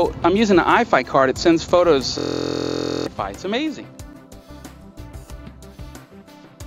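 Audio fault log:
2.18–3.07 s, system hang loop: the computer or its audio driver stalled while the sound hardware kept replaying one 23.22 ms stretch of its ring buffer, which fits a 1024-sample buffer. Repeating 38 times at 43.1 Hz, it becomes a steady buzz, and about a second of audio never plays.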